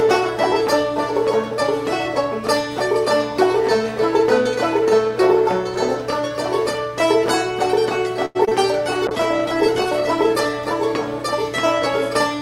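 At 8.25 s a short stall from a late packet holds the sound for about 96 ms, until 8.37 s. The jitter buffer ran dry, so the receiver stretched the last sound and then resumed where it left off. On a spectrogram this shows as a smeared, frozen band.

Two short concealed packet losses follow back to back, from 8.45 s to 8.49 s and 8.49 s to 8.53 s, each 20 ms of audio that never arrived. The decoder extrapolated the preceding sound to cover the gap, which produces a brief wobble. The spectrogram shows a blurred sliver.

From 9.08 s to 10.81 s a call bitrate drop takes the encoder from 48 kbps down to 15 kbps, where it stays for about 1.7 s. Coarser coding makes the sound rough and muffled, and on a spectrogram the upper frequencies are visibly cut off.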